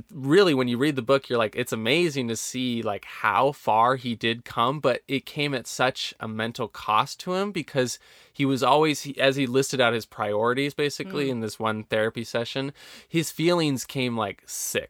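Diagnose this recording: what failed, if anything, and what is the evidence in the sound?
Nothing failed in this speech recording, and the sound carries no evidence of any fault.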